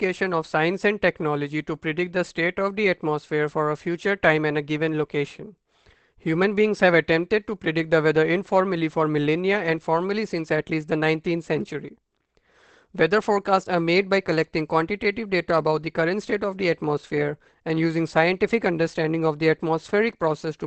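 From start to finish the speech contains nothing above 8.4 kHz and sounds muffled and hoarse, with plainly audible coding damage. The likely cause is Opus compression running in its SILK speech mode at a wideband setting, which fits a low bitrate near 16 kbps.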